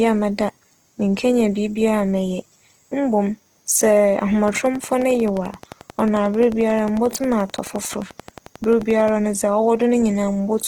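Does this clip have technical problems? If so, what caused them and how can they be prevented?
Yes. Opus compression is plainly audible throughout the speech. The music-style mode keeps each band's energy but fills starved bands with folded or noisy content. Voiced sounds turn grainy and rough. Bandwidth stays full, reaching about 20.2 kHz. The damage fits a low bitrate near 16 kbps. Prevent it by encoding at a higher bitrate.

A train of clicks runs from 4.48 s to 9.09 s. About fifty clicks arrive at a regular 11.3 per second. They peak roughly 5 dB above the speech and tick through the pauses as well. Likely cause: interference from nearby equipment or a faulty connection or power supply. Prevent it by isolating the gear and checking cables and the interface.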